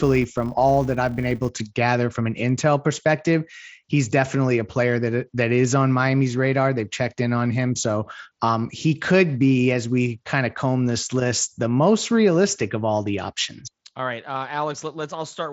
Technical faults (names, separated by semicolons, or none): filter restarted on every block